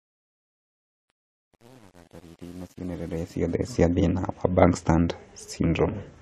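Truncation distortion on a fade runs from 0.0 to 3.73 s of this speech clip, worst up to 3.42 s: the undithered fade keeps too few bits, which fits a 9-bit word length, so quiet passages turn into gritty, stepped waveforms.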